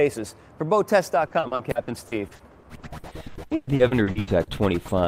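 Repeated packet loss (robotic sound) runs from 1.27 to 4.50 s. Short dropouts, the longest 120 ms, are patched by stretching earlier audio, concealing about a third of the stretch and making it choppy and robotic.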